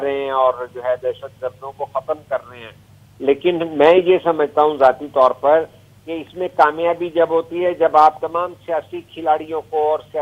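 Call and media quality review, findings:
No audible faults found.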